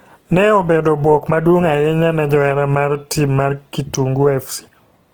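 Speech run through a starved low-bitrate codec, likely Opus in its CELT mode, with damage pointing to roughly 16 kbps. This Opus compression keeps the full band to 20.1 kHz but fills underfed bands with folded or noise content, making the voice plainly grainy and rough throughout.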